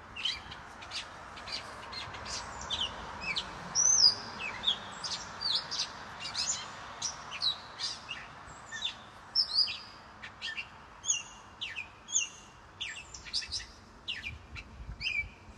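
Nothing goes wrong anywhere in the audio, so there's no fault to point to at any moment.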